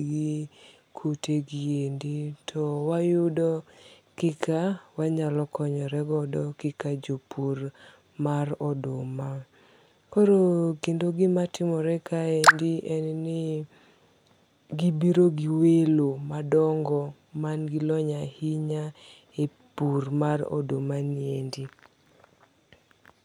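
No technical faults can be heard in the speech.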